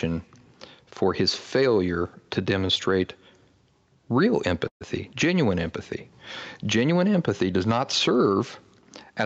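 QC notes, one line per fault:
Throughout: gain pumping. Gain swells in pauses and ducks by roughly 5 dB under louder speech, likely a fast limiter clamping gain set too high.
4.67 to 4.83 s: call audio freeze. A brief fading buzz or hiss, then 100 ms of silence; speech resumes 132 ms late with nothing lost, likely delayed packets emptying the jitter buffer.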